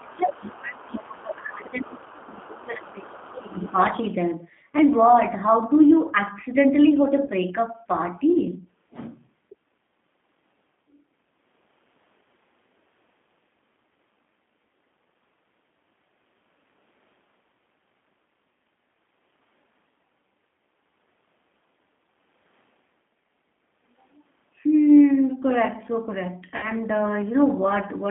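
Across the whole clip the speech carries plainly audible G.729 codec damage: an 8 kbit/s line squeezed into roughly 200 Hz to 3.5 kHz, sounding slightly rough and synthetic. Unlike a simple low-pass, the harshness is built into the voice's texture rather than just missing treble.

From 0.0 to 3.78 s the main voice repeatedly dips, dropping by around 25 dB at its deepest. This is likely speech suppressed in double talk, with the echo canceller turning down the talker while the far side spoke. Unlike dropouts from network loss, the dips follow the far side's activity.

During that same stretch, a second voice surfaces well below the main speech at 0.0 to 0.13 s, 0.34 to 0.54 s, 0.92 to 0.97 s, 2.07 to 2.64 s and 3.32 to 4.12 s, clearest in the last. It is other side's voice leaking through, likely left behind by incomplete echo cancellation. Unlike background chatter, it coincides with the suppression.

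At 7.25 to 7.30 s, about 30 ms is lost, which fits a single packet, and at 26.57 to 26.70 s about 60 ms, fitting two. This is VoIP packet loss concealed by the speech codec. Instead of a clean gap, the voice is stretched into a fading sound and stays weak briefly afterwards.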